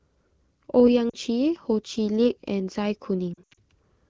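At 1.09 to 1.14 s there's a short stretch of lost AMR speech frames: about 40 ms that failed their radio checksum, so the wideband decoder reused its last good pitch and vocal tract settings at lower gain. You hear a quick dip. The worse patch runs from 3.34 to 3.59 s. About 160 ms of loss is scattered across roughly a quarter second, with the longest run 80 ms. There the sound drops toward silence, and comes back rough, over speech that's clean HD Voice quality, which fits AMR-WB at around 12.65 kbit/s.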